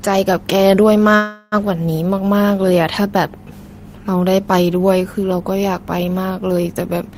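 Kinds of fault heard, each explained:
Call audio freeze: from 1.15 to 1.55 s the sound smears into a fading buzz, then resumes intact, likely a jitter buffer running dry.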